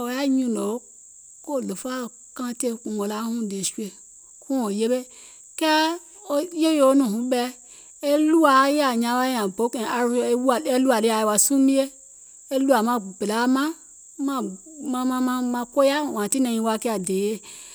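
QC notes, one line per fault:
No technical faults are present; the speech signal stays continuous and stable over its whole duration.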